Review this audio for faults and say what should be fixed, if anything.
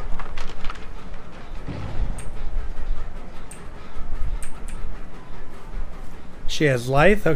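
No faults found; nothing to fix.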